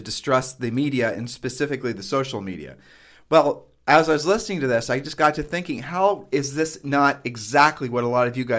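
From the start to 1.75 s, just before "the social media", the speech carries a steady ticking at 4 per second, riding on the sound itself. This is a resampler restarted on every block: the 48 kHz to 16 kHz conversion was run on 250 ms blocks separately, so at each block edge the converter lacked the true neighbouring samples and left a small error, heard as one tick per block boundary.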